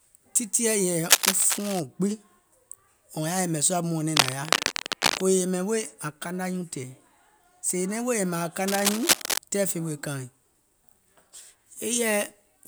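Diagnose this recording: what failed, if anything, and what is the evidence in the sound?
Cable scratch noise in the analogue wiring: dense, ragged bursts of scratching, roughly as loud as the speech, at 1.05–1.80 s, at 4.16–5.22 s after "yɛ̀mɛ̀ sùȧ mɔ̀ɔ̀nɛŋ", and at 8.68–9.38 s before "tɛɛ̀ fè weè kaaìŋ". The likely cause is a worn cable or connector whose contact resistance fluctuated as it moved.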